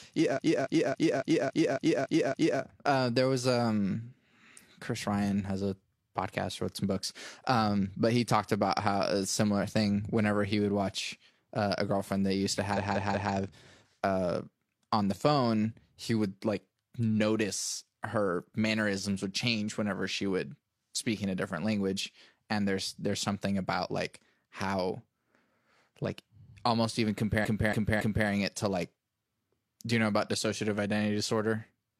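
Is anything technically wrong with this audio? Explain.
Yes, the speech has repeated frames in three places. From 0.33 to 2.56 s a block of about 279 ms plays eight extra times. From 12.73 to 13.29 s a 186 ms block repeats three times, and from 27.40 to 28.24 s a 279 ms block repeats three times. A run of compressed frames was delivered more than once, so the decoder replays it, causing a stutter that lengthens the audio. On a waveform or spectrogram, identical blocks sit side by side.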